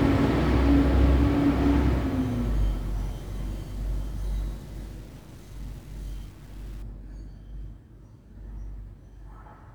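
Low bit depth without dither runs from 0.0 to 6.83 s. The sound was likely reduced to about 8 bits by truncation, with no dither noise added first. The rounding error therefore tracks the waveform instead of sitting as a steady hiss. The result is a grainy distortion that shifts with the sound, quiet passages turning rough. The distortion sits roughly 30 dB below the signal.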